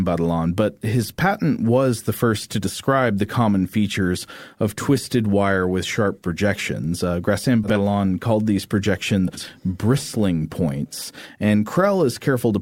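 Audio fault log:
7.64–7.78 s and 9.28–9.46 s, frames out of order: neighbouring blocks of about 60 ms and 80 ms were decoded swapped, so each stretch plays halves exchanged, a garbled flutter, just before "called these" and "bristling points".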